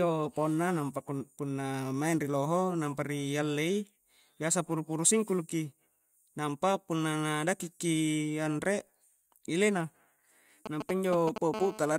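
Speech clip with GSM signalling bursts from 10.66 to 11.38 s: galloping groups of ticks and brief 217 Hz buzzes, nearly as loud as the speech, as a nearby 2G phone signals. From 11.54 to 11.94 s comes GSM phone buzz, a steady raspy 217 Hz tone rich in harmonics about 11 dB below the speech. Its continuity marks an active call rather than intermittent signalling.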